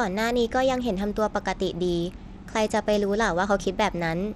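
Bluetooth SBC compression runs through the whole speech clip, likely the cause of its plainly audible damage: the treble thins and flickers while gritty noise and aliasing ride on the sound, consistent with a low bitrate near 96 kbps leaving SBC's upper sub-bands starved of bits.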